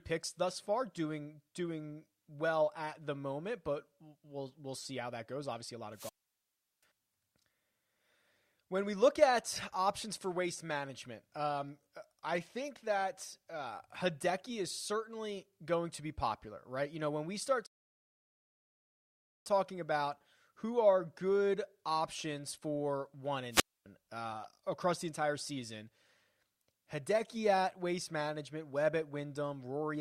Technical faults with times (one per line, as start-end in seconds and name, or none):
5.93-6.84 wireless microphone squelch dropout
17.66-19.46 rebuffering stall
23.51-23.86 wireless microphone squelch dropout